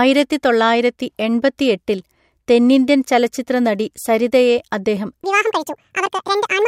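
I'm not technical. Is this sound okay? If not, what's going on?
No. From 5.24 s to the end at 6.67 s there is a section at the wrong speed, likely from playback running on the wrong clock. That stretch plays about 1.81 times too fast, so the speech turns hurried and nearly an octave higher.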